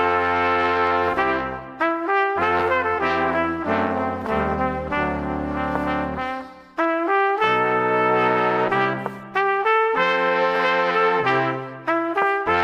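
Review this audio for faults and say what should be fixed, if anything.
Nothing to fix: no audible faults were found on review.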